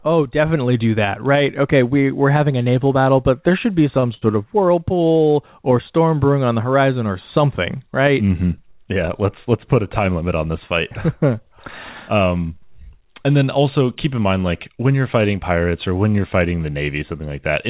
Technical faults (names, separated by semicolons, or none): short stall from a late packet; jitter buffer speed-up